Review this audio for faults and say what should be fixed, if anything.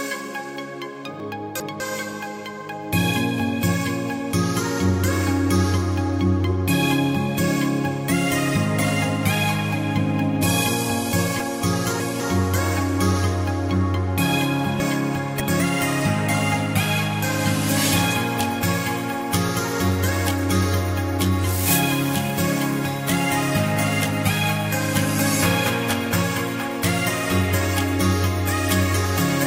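Jumbled moments at 1.2–1.8 s, 11.4–12.2 s and 14.8–15.6 s are chunks out of order: a 200 ms chunk plays two, three and three chunks late, respectively. Buffering and reordering chunks by sequence number or timestamp before playback or writing would prevent this.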